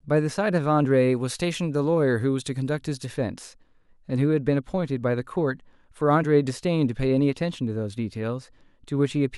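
From 0.91 to 3.06 s the speech has pre-emphasis left on. The treble boost used for recording was never undone, so 10 kHz sits about 8 dB hot relative to 1 kHz, which fits the CD 50/15 µs curve. It comes across thin, bright and hissy on sibilants.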